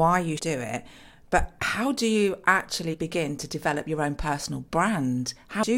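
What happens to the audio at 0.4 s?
Right around there, from 0.37 to 0.40 s, there's a quick glitch in the speech. That's damaged data in the compressed stream: some bytes got mangled, so the decoder misreads those frames, loses sync and hunts for the next frame header before playback settles.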